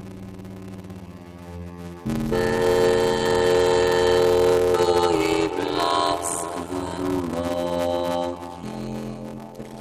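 From the first moment to the end, the sound carries a steady buzz at 86.1 Hz, the signature of a block size mismatch (padded). Each block arrives short and its remainder is zero-filled, which fits 512-sample reads holding only about 320 real samples. The inserted gaps chop the audio at the block rate and stretch it to 0.625 times normal speed. Unlike a sample-rate error, which slows audio by lowering its pitch, this keeps pitch roughly normal.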